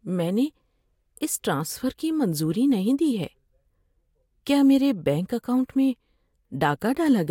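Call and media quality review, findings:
No audible faults found in this speech recording.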